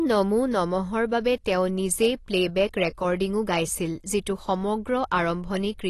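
Speech, and the whole clip carries AAC compression damage that is plainly audible. Nothing sounds above 12 kHz, so the top end is cut off and the sound is dull, and sibilants and sustained sounds take on a smeared, warbling, fizzy texture. The likely cause is AAC-LC coding at a low rate, which fits roughly 32 kbps. At that rate the encoder drops high bands and quantises the remaining spectrum coarsely, frame by frame.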